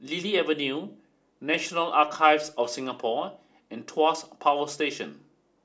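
Nothing stood out on listening to this recording.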